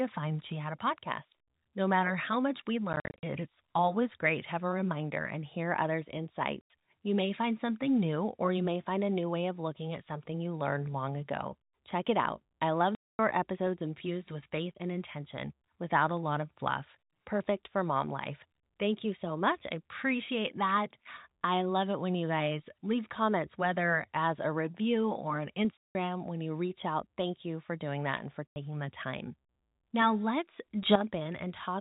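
Packet loss filled with silence occurs at 2.93–3.23 s, 6.61–6.70 s, 12.95–13.19 s, 25.77–25.95 s and 28.48–28.56 s. Lost packets were replaced by dead silence, cutting hard-edged holes into the speech. The first burst scatters about 190 ms of gaps over 300 ms, with runs of up to 50 ms. The gap lengths fit 10 ms packets.

A sudden gain jump from 30.83 to 30.96 s lifts the speech and background together by about 9 dB in an instant, likely from a gain setting applied without a ramp.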